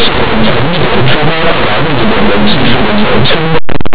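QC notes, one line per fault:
Throughout, linear audio read as companded: the speech comes through as very loud, harsh distortion. Plain linear 8-bit samples are being expanded as mu-law codes, so tiny values just to one side of zero become the loudest outputs while those on the other side stay small.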